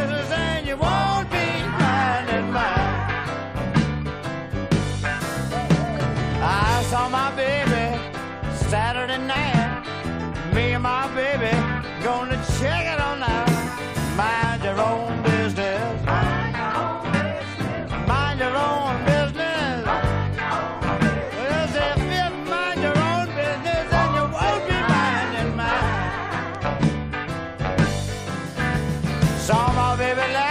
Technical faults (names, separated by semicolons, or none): damaged data in a compressed stream